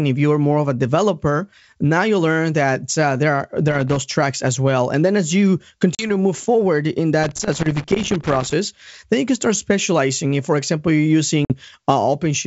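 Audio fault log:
3.68–4.02 s and 7.23–8.53 s: loose connector crackle. Irregular bursts of scratchy crackle break into the speech, the second lasting over a second. A worn or dirty contact is making and breaking as it shifts, chopping the signal.
5.95–6.11 s and 11.45–11.53 s: packet loss on an ADPCM call. Hard-edged gaps of about 40 ms and 50 ms cut the speech. It returns with brief distortion while the decoder's predictor and step size resynchronise with the sender's.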